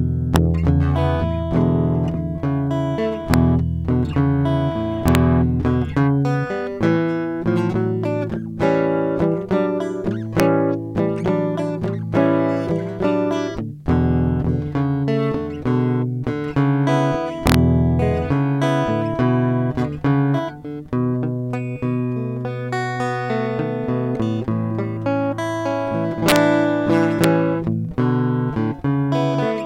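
Integer overflow hits this music at 0.36, 3.34, 5.08 to 5.15, 10.40, 17.47 to 17.54, 26.29 to 26.36 and 27.24 s. Peaks pushed up to about 2 dB past full scale wrap to the opposite sign instead of being limited, producing violent cracks far sharper than clipping.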